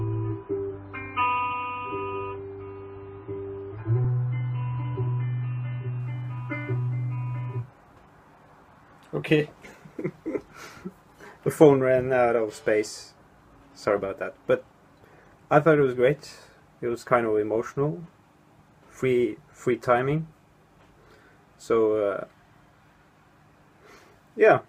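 The audio opens on an adaptive stream starting at a low bitrate: from 0.0 to 6.0 s nothing sounds above about 5.5 kHz and codec artefacts are stronger, consistent with roughly a 24 kbit/s MP3 tier. At 6.0 s the treble returns without a gap, which points to a step up to about 128 kbit/s once the player had measured the connection.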